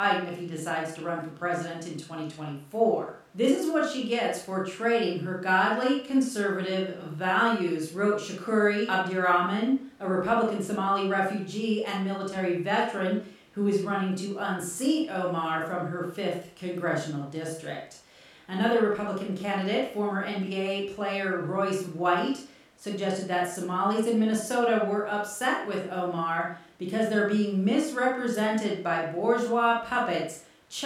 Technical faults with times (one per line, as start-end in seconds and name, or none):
none